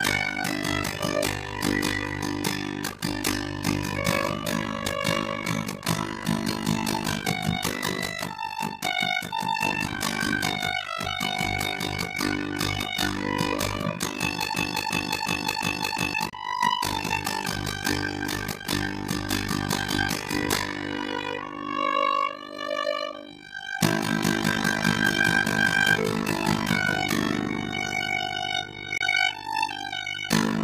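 Overlap-add ripple runs through the whole clip: the audio was split into windowed frames and rejoined with overlaps that don't sum to a steady gain, so the level dips by about 60 dB roughly 50 times a second, giving a harsh, robotic flutter.

A broken-record loop runs from 14.54 to 16.14 s. A 356 ms fragment repeats four times back to back, likely because the player or stream stalled and kept resending its last buffer. The material that should have played there is gone.

Bluetooth dropouts at 16.30 to 16.34 s and 28.98 to 29.02 s cut the sound to silence. The audio resumes about 23 ms further on, which fits a single packet that likely missed its deadline to the headphones.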